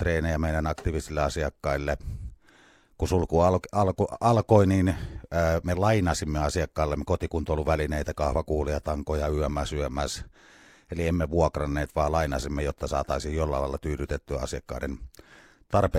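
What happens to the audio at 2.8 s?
Nothing goes wrong at 2.8 s; the speech carries on there without any audible fault.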